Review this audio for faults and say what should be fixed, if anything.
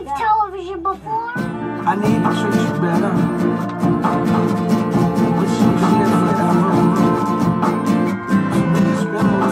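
A second, slower capture path or an edit that left two copies out of step has likely mixed the same audio in twice, a doubled audio track, from 4.10 s to 7.42 s. A full-band copy trails the original by about 300 ms at roughly 5 dB lower, with no decay or room colour. It switches on and off abruptly at those times. To prevent it, route each source through a single capture path and check edits for overlapping duplicate regions.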